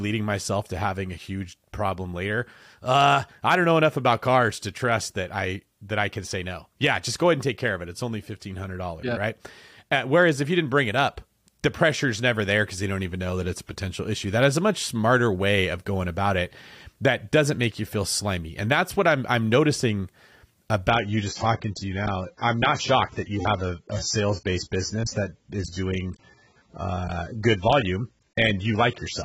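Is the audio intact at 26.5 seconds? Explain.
No. At 26.5 s the speech is inside a stretch played as an adaptive stream at a lower bitrate, running from 20.90 s to the end of the clip. When the connection slowed, the player switched mid-stream to a cheaper encoding, a fall that sounds like roughly 96 down to 16 kbit/s AAC. Nothing above 8 kHz remains, and the speech turns dull and swirly. Unlike a dropout or buffer stall, the switch is instant and leaves no gap.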